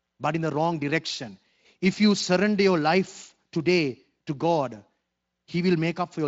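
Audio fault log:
No faults to log for this audio.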